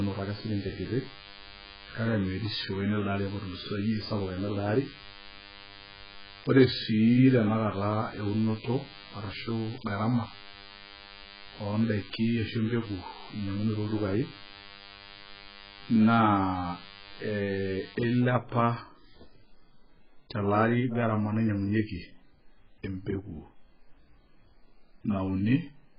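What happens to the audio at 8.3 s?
At 8.3 s a DECT cordless phone buzz is running, from 0.0 to 18.19 s. Radio bursts every 10 ms are rectified into a thin 100 Hz buzz with many harmonics, about 20 dB below the speech, showing as evenly spaced horizontal lines on a spectrogram. The speech also has heavy damage, with nothing above 5 kHz and a dull, smeared, warbling texture, likely from AAC compression at a very low bitrate near 8 kbps. On a spectrogram this appears as a hard ceiling at 5 kHz.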